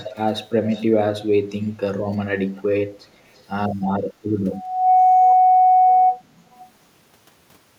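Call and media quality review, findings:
Echo leak, 0.0–0.2, 0.65–0.84, 3.35–3.43, 6.52–6.69 s: faint voice copy about 0.34 s late; likely speakerphone echo-canceller residual. Spectrogram: ghost harmonics trailing speech.

Loudspeaker feedback squeal, 4.52–6.22 s: 741 Hz tone building over roughly 0.4 s to about 10 dB over signal; mic–speaker loop gain above one. Spectrogram: one bright horizontal line.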